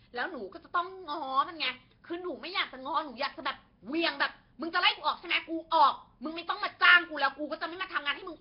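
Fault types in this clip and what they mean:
Nellymoser compression: the speech has a rough, hissy halo and a heavily smeared, underwater quality, likely from the Nellymoser Asao codec at a rate fitting about 22 kbps. A spectrogram shows nothing above 5.3 kHz, with weak bands filled by patchy noise instead of clean harmonics.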